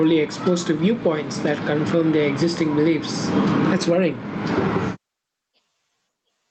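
Gain pumping runs through the whole speech recording. The level swings by around 20 dB, so it seems to breathe. The likely cause is input gain set far too high, with a fast limiter pulling it down on each peak. On the waveform, loud and soft parts sit closer in level than usual. A spectrogram shows the highs ending near 8 kHz from the call codec.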